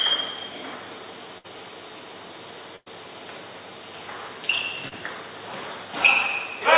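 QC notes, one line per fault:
1.38–1.46 s and 2.76–2.88 s, burst of packet loss: consecutive packets were lost or arrived too late to play, so the receiver extended the last sound and let it die away instead of jumping ahead. At 1.38 s about 60 ms is synthetic fill over 60 ms of lost audio. At 2.76 s the fill runs about 100 ms and fades into roughly 50 ms of silence. In both cases the sound resumes further on with that stretch gone.
4.88–4.94 s, short concealed packet loss: a brief hole of about 20 ms was patched by continuing the preceding sound for about 33 ms, then cross-faded back into the real signal, with about 7 ms trimmed at the join. The result is a quick smear or wobble rather than a dropout, and like the rest of the clip it is band-limited to 4 kHz by the 64 kbps G.711 mu-law call path.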